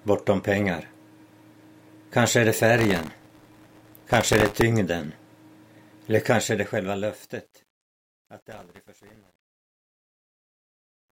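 From 2.78 to 4.61 s the processor falls behind its audio deadlines, missing a few hundred very short buffers in a row, each well under a millisecond. Every miss replays a scrap of old audio with hard edges, so the sound is torn by a dense gritty processor overload crackle.

From 6.15 s to the end at 11.11 s, during the fade-out, the volume stage keeps too few bits and adds no dither, which fits roughly 10-bit resolution. The truncation distortion on the fade makes the tail turn grainy, at its worst from 7.78 s onward.

From 8.50 to 9.35 s the processor overload crackle returns with about half as many missed buffers, laying another burst of harsh tearing over the already gritty, fading sound.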